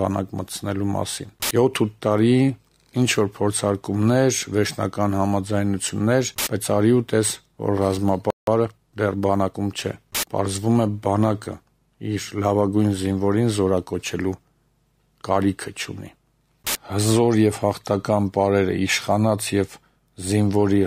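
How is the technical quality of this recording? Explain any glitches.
The recording has two linked playback glitches a little past the eight-second mark: a brief dropout followed by a hurried stretch.

From 8.30 to 8.47 s there is a playback stall: the audio cuts out mid-flow for about 170 ms and then resumes. The player likely ran short of data, or its thread was held up, so nothing reached the output until it recovered. On a waveform this is a flat, near-silent gap; a spectrogram shows a clean vertical blank band across all frequencies.

Immediately after, from 8.47 to 9.59 s, comes time-compressed catch-up. The player trims its accumulated backlog by removing small slices and cross-fading the joins, so the sound runs at 1.15 times normal speed with its pitch unchanged. On a spectrogram the harmonics stay at the same heights while events are squeezed closer together in time.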